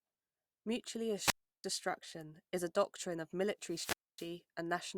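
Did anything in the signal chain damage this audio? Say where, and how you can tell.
Yes. The radio link of an analogue FM wireless microphone lost signal twice, and each time the receiver's squelch shut the output off. The result is a wireless microphone squelch dropout from 1.20 to 1.67 s with a hole of about 340 ms. A second one runs from 3.64 to 4.37 s, right after "is a doctrine of", muting for about 260 ms. Each follows the same pattern: hiss rises as the carrier fades, the speech drops to near silence, and then it returns.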